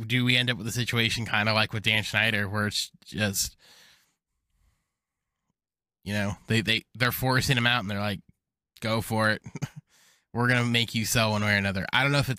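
No technical faults can be heard in this recording.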